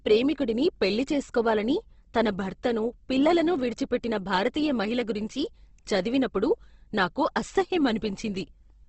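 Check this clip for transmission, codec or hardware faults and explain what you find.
One fault runs through the whole clip, most likely Opus compression in its CELT mode at a rate that fits about 16 kbps. Starved of bits, the encoder preserves each band's energy but rebuilds fine detail from folded or noise-like content. The speech sounds plainly grainy and rough, with nothing above 8.2 kHz.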